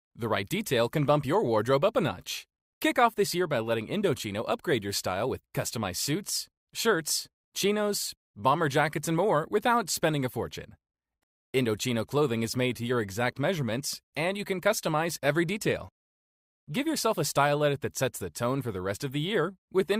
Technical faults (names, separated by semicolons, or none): rebuffering stall